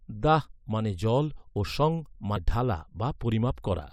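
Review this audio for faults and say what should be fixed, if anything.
At 2.36 s, right after "মানে জল ও সং", the speech has a short blip from damaged data in a compressed stream. Corrupted bytes make the decoder misread a frame and resynchronise. A spectrogram shows a thin broadband vertical streak, and the waveform shows a brief discontinuity. To prevent it, verify the file with checksums and use error-protected transfer or storage.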